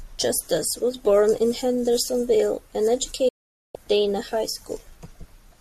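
At 3.28 s the speech drops out in a digital broadcast dropout: the receiver stopped getting decodable frames, so it muted through a fade of about 8 ms and stayed silent until 3.75 s, with roughly 0.46 s of programme gone, which fits a run of about nineteen 24 ms frames. It sounds like an abrupt hole in the speech. The waveform flattens to silence, and the spectrogram shows a clean vertical blank band across all frequencies.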